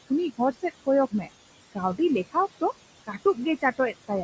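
A faint, steady whistle around 3 kHz sits under the whole clip, about 20 dB below the speech, with a grainy edge on the quieter stretches. These are converter idle tones. A delta-sigma converter running without dither has locked into a repeating bit pattern on a small input. That pattern produces a fixed tone instead of randomised noise, so it stays audible through the pauses and shows as graininess where the speech is soft.

Also present throughout are noise suppressor artifacts. Between phrases the background drops away, then swells back under the speech. The suppressor is estimating the steady noise band by band and frame by frame, cutting harder in gaps than under speech. The room noise it is working on lies about 15 dB below the speech.

From 0.31 to 0.87 s, speech is cut by the noise suppressor. Soft sounds within that span seem swallowed, dropping by up to about 18 dB, and roughly a tenth of a second of speech is affected in total. 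The suppressor has misread those low-level speech components as background and pulled them down with the noise.

The same speech cut by the noise suppressor happens again from 1.11 to 1.29 s. For roughly 100 ms, quieter parts fade out by as much as about 15 dB, so a consonant or word ending sounds faint. Here too, speech energy the suppressor mistook for noise was attenuated along with it.

At 2.17 to 2.19 s a single loud pop cuts through, peaking at about 5 dB above the speech, sharp and brief, while the speech continues underneath. This is most likely a sudden voltage step from a plug, a switch, static or a driver glitch. The circuitry after it shaped that step into a short click-like burst.

From 3.61 to 4.11 s the speech is cut by the noise suppressor once more. About 100 ms of soft material sounds dulled or missing, sinking by up to about 15 dB. The suppressor has again classified faint speech detail as steady noise and gated it down. 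The bandwidth, topping out at 8 kHz, is simply the call microphone processing.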